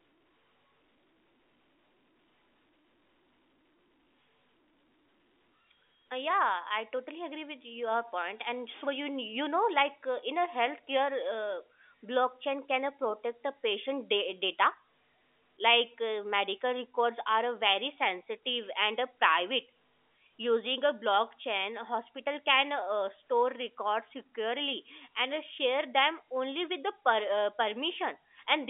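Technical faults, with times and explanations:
Nothing here counts as a fault: the speech simply has the narrow, band-limited sound of an ordinary G.711 telephone line, with nothing above about 3.7 kHz.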